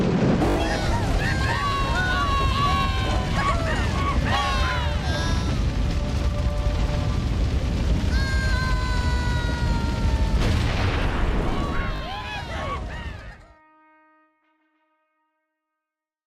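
At 0.5 s and again at 11.96 s, fresh audio missed its deadline, so the device replayed its last block: a repeated buffer. Each is a brief buzzy stutter of identical slices with hard joins, consistent with a 20 ms buffer, skipping roughly 70 ms and 40 ms of sound.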